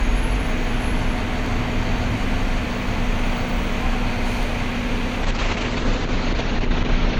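At 1.46 s and again at 4.43 s the sound jumps forward, with no gap. Each is likely a dropped buffer (overrun): the samples weren't collected before the hardware overwrote them, so a few milliseconds vanished and the edges butted together.

From 5.24 s to the end the audio turns rough, watery and muffled, its top end cut off around 8 kHz instead of reaching 20 kHz. This is a call bitrate drop: the encoder was pushed from a high rate down to something near 8 kbps for the last two seconds, forcing much coarser coding.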